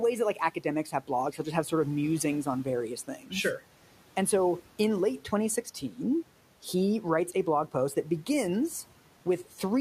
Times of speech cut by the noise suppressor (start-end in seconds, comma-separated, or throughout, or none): 3.07-3.32